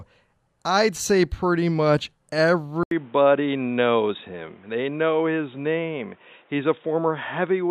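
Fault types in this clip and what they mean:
Input switched to a poorer device: At 2.83 s the speech drops out for 80 ms. When it returns, the sound is duller and boxier, with nothing above 3.8 kHz. A new background noise appears, roughly 35 dB below the speech. Loudness stays about the same. This narrower, noisier sound lasts to the end. The likely cause is the recording input changing mid-take to a lower-quality microphone or a headset's call mode.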